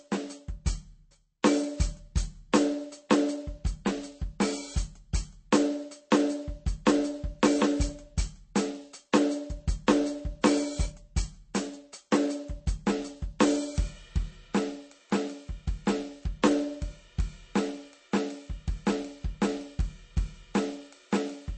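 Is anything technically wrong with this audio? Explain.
Yes. Throughout the music the treble stops dead at about 8.4 kHz, and the sound is watery and swirly with plainly audible damage. This is likely MP3 compression at a bitrate low enough to suggest about 32 kbps, where the encoder drops the top band and switches weak frequency lines on and off between frames.

At 9.12 s an attack is preceded by a brief hiss, about 10 ms long, and lands softened. This pre-echo occurs because the codec spreads quantisation noise across a whole block, so noise scaled for the loud onset leaks into the quiet moment before it.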